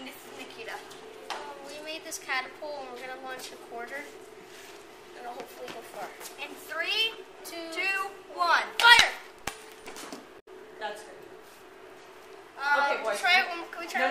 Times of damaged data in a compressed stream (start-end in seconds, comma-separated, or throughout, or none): 10.36-10.48